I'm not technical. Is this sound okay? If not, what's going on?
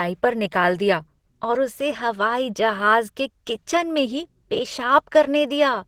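No. Throughout the speech there is a muffled, hoarse, grainy quality, most likely from Opus compression squeezing the audio hard. Unlike MP3 damage, it swirls less; the sound is rough instead, as if it were rasped rather than bubbling.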